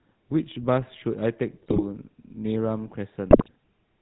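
GSM full-rate codec coding runs throughout: the speech is rebuilt from a vocal-tract model driven by sparse pulses, nothing above 4 kHz survives, and everything sounds buzzy and gravelly, consistent with 13 kbps full-rate coding. GSM bit errors strike from 1.63 to 2.08 s and again from 3.31 to 3.49 s, where corrupted filter, pitch and gain values warp frames into squawks, pops and gargling.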